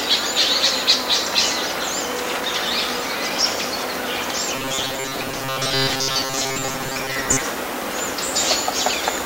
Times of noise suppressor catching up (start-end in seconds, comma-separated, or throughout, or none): none